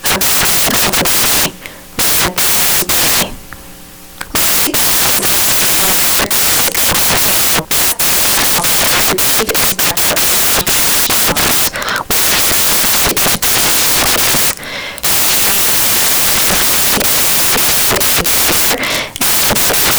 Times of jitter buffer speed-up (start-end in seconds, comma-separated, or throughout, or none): none